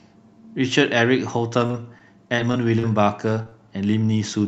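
Repeated packet loss (robotic sound) affects this speech clip from 1.59 to 3.53 s. Ten short holes, the longest 35 ms, are each filled by extending the sound just before it. About 11% of that stretch is concealment, giving a choppy texture on a call-codec path band-limited near 8 kHz.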